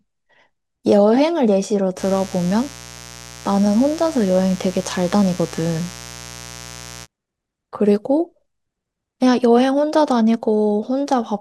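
Speech with a steady, raspy mains buzz from 1.96 to 7.07 s, roughly 20 dB below the speech: switching spikes from a dimmer, rectifier or poor shielding spray 60 Hz harmonics up into the kilohertz range.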